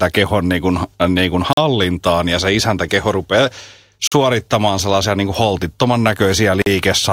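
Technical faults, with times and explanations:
1.53–1.57 s, 4.07–4.12 s and 6.62–6.66 s, gap between chunks: a 44 ms hole of silence cuts the speech after "kuin äh niin kuin", after "ja se isäntäkeho rupeaa" and after "sellaisia niin kuin holtittoman", repeating every 2.5 s as each chunk joins the next. Unlike a dropout, nothing is missing: the speech resumes exactly where it stopped, just pushed later by the inserted silence.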